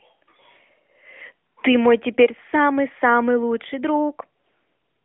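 No technical faults turn up anywhere in the recording. It carries the narrow band of an AMR narrowband mobile codec path, roughly 250 Hz to 3.4 kHz with nothing above 3.6 kHz and only light coding damage, which fits the 12.2 kbps mode.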